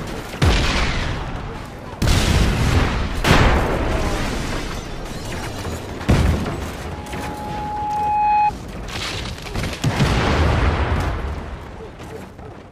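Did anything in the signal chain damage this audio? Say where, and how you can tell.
Yes. A loudspeaker feedback squeal forms in the acoustic path at capture, between 6.92 and 8.52 s. A single tone at 839 Hz swells over roughly a second and a half until it sits a few decibels above the rest of the sound, then stops. The microphone was picking up the loudspeaker it fed, and at 839 Hz the loop gain exceeded one, so that frequency reinforced itself on each pass.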